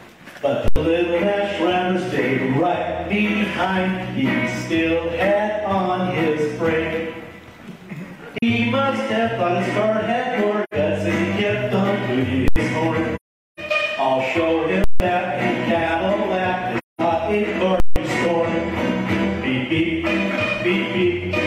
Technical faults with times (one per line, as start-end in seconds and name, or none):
0.68-0.76 invalid numbers at full scale
8.38-8.43 AAC frame loss with muting
10.63-10.74 AAC frame loss with muting
12.48-12.56 invalid numbers at full scale
13.16-13.60 AAC frame loss with muting
14.84-15.00 invalid numbers at full scale
16.78-17.01 AAC frame loss with muting
17.80-17.96 invalid numbers at full scale